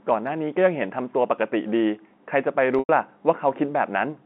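A short stretch of speech over a G.711 phone line, band-limited to about 200 Hz to 3.6 kHz, with one dropout from packet loss with pitch repetition at 2.79 to 2.89 s. Roughly 100 ms went missing, which fits about ten 10 ms packets. The receiver loops the last pitch period into a brief buzzy hold that fades, then cross-fades back into the speech.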